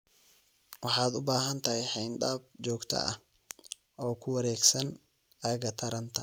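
Speech recording with no technical faults to report.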